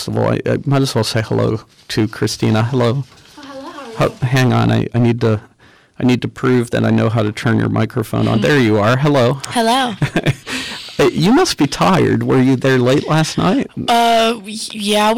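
Hard clipping runs through the whole clip: the signal was driven about 15 dB past what the stage could pass, so roughly a tenth of the samples were flattened at that stage's limit. Those squared-off peaks add high harmonics, giving every loud passage a harsh, gritty fuzz.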